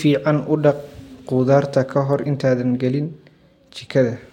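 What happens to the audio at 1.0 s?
Nothing goes wrong at 1.0 s; the speech runs through that moment intact, with no dropout, click or distortion.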